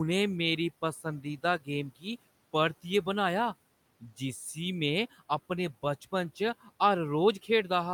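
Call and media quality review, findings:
Speech cut by the noise suppressor at 1.21–1.68 s and 1.90–2.06 s: quiet speech mistaken for noise, pulled down about 16 dB, sounding swallowed.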